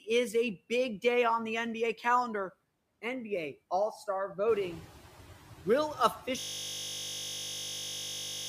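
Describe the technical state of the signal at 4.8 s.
At 4.8 s the background noise is still coming through louder than before, now nearly settled back down. This is the noise suppressor catching up, from 4.48 to 4.84 s. The room noise jumps by about 13 dB around 4.5 s, and the suppressor's noise estimate takes about 360 ms to adapt, cutting only about 6 dB until then.

The residual noise also drops between syllables and rises under them. These are noise suppressor artifacts, present throughout the clip: band-by-band gains are recalculated every frame, pulling steady noise down by about 13 dB once settled.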